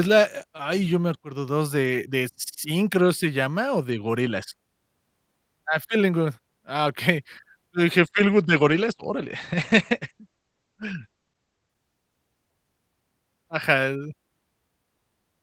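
Around 8.04 s the speech gets rougher and duller. That's a call bitrate drop. The bandwidth estimate fell, so the encoder had far fewer bits to spend. The sound points to a fall from roughly 32 kbps to around 12 kbps, with the top end pulled in from 20 kHz to 8 kHz. It sits at its worst for about 3.4 s, sounding muffled and watery, then recovers by 13.01 s.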